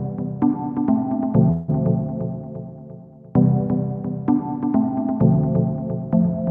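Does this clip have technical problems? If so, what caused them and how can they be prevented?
Yes. A call audio freeze runs from 1.51 to 1.70 s: the sound stalls into a fading buzz or hiss for about 170 ms, then resumes where it stopped with nothing lost, leaving everything after it about 170 ms late. The likely cause is packets held up in transit, draining the jitter buffer. A larger adaptive jitter buffer, or a steadier network path with less congestion, would prevent it.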